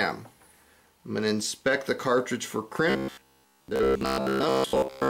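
From 2.90 s to 5.09 s the sound turns into a rigid, metallic buzz pitched at 66.7 Hz, robotic sound from repeated short buffers. Most of the audio is likely replaced by repeats of a 15 ms buffer, showing as identical repeating waveform cycles and evenly spaced 66.7 Hz harmonic lines on a spectrogram.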